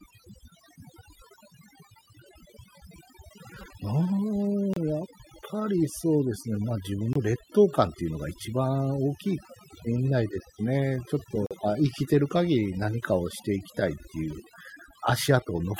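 Speech with overdone noise removal throughout: the background drops and breaks up into twinkling specks, showing on a spectrogram as isolated flickering dots and gaps carved into quieter harmonics. Brief dropouts of 29, 23 and 43 ms at 4.74–4.77, 7.13–7.17 and 11.46–11.52 s appear as flat-line gaps in the waveform, likely a Bluetooth stall as the headphone buffer ran dry.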